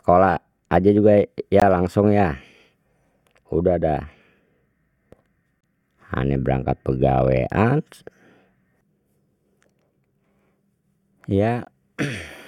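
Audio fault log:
1.60 s, 5.61–5.63 s and 11.65 s, gap between stream segments: the speech stops dead for about 18, 27 and 18 ms, with hard edges, and picks up exactly where it left off. The holes fall about 4 and 6 s apart, multiples of 2 s, which fits 2-second segments whose time stamps leave a sliver uncovered that the player fills with silence. Unlike a dropout, nothing is missing. The timeline is simply stretched by the inserted silence.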